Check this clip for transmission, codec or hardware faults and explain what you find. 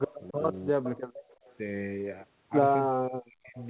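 The speech has two recurring faults: echo leak and speech suppressed in double talk. Its band stops at 4 kHz, which fits a 64 kbps G.711 A-law call path.

Echo leak at 0.07–0.15 s, 0.83–1.55 s and 3.59–3.63 s: the far end's canceller likely let loudspeaker pickup through. A faint copy returns about 0.34 s late, roughly 25, 15 and 30 dB below the speech. The middle stretch is clearest.

Speech suppressed in double talk at 0.18–0.41 s, 0.72–0.87 s and 2.92–3.57 s: likely the canceller mistook overlapping talk for echo and attenuated it. The voice dips by around 10 dB at first, then drops out almost entirely later, for roughly half a second near the end.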